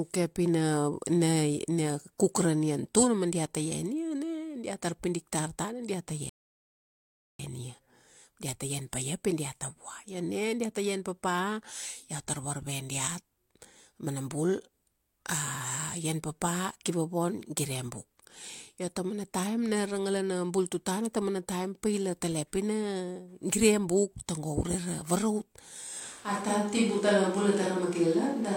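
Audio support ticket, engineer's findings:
Rebuffering stall, 6.29 to 7.39 s. Speech cuts to silence for 1.1 s, then resumes at the exact point it stopped. No audio lost; 1.1 s added. Player component. Playback buffer ran dry and waited for more downloaded data.

Switch to a distant microphone, 26.02 s to end. Speech turns roomy and hollow at once. Thinner low end. No obvious level drop. Room noise rises to roughly 30 dB below the speech. Likely cause: close mic signal lost, far pickup used instead.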